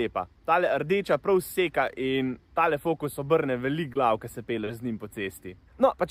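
At 3.93 s and again from 4.64 to 4.68 s comes short concealed packet loss: about 20 ms and then 30 ms of audio arrived too late, and the receiver patched each hole by extending the preceding sound. The result is a brief smear or wobble rather than a true silent dropout.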